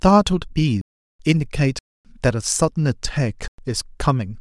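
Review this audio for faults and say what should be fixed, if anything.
Three blocks of digital silence cut into this speech: 0.81 to 1.20 s (about 381 ms), 1.79 to 2.05 s (about 260 ms), and 3.48 to 3.58 s (about 107 ms). Each is a hard drop to zeros and back with no fade, leaving a short hole. That points to the output buffer not being filled in time. Give the audio thread more headroom, with a larger buffer or less work per callback, so it never underruns.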